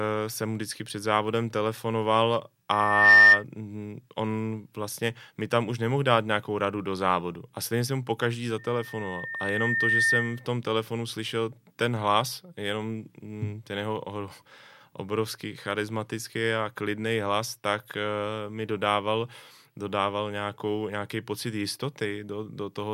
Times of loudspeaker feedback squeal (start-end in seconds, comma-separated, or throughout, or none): 2.71-3.44, 8.58-10.47